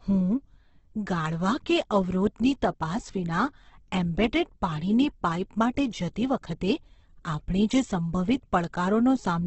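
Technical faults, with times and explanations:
Throughout, Opus compression: the speech is heavily damaged, with nothing above 8.2 kHz, and its harmonics sound rough, grainy and noisy rather than clean. This is likely an Opus encoder in its CELT mode at a rate that fits about 12 kbps. It keeps each band's energy but fills starved bands with folded or noise content. Unlike MP3, which punches spectral holes that swirl, this leaves a steady hiss-like graininess.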